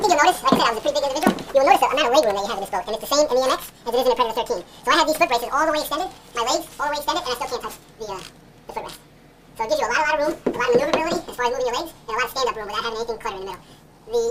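From start to finish the sound runs at twice its proper speed and a full octave, 12 semitones, high. That's audio read two samples at a time: the reader treats each pair of samples as one frame.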